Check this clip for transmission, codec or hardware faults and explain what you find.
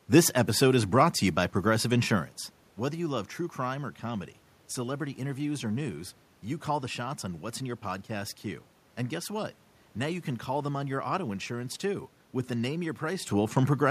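No transmission, codec or hardware fault can be heard anywhere in the speech. A room background sits under it, and the level shifts at around 2 s and again near 13 s sound like the talker moving relative to the microphone.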